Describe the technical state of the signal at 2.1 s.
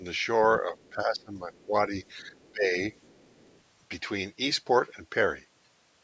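At 2.1 s the call's echo canceller was likely caught in double talk, struggling to separate the near talker from loudspeaker echo and pulling both down. Between 0.61 and 2.79 s the speech dips in patches, at worst by around 15 dB, sounding ducked and intermittently dull.

Overlapping that, from 2.07 to 2.51 s, some of the other side's voice is leaking through, likely because the canceller left part of the loudspeaker signal in the microphone feed. It sits very faint, far beneath the main speech.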